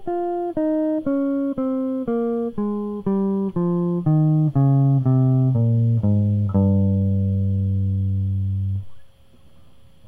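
Throughout the music, sample clock jitter is present: the converter's timing wanders by under a microsecond, so fast-changing parts of the waveform are sampled at slightly wrong values. The resulting error sits about 60 dB below the music, a faint hiss that thickens on loud, bright passages.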